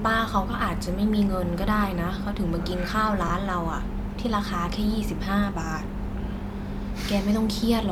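Speech clip with lost LE Audio frames from 3.28 to 3.30 s, about 20 ms, which fits two lost frames. The decoder fills the gap with a noisy, sign-scrambled smear, visible as a brief smear of the preceding spectrum on a spectrogram.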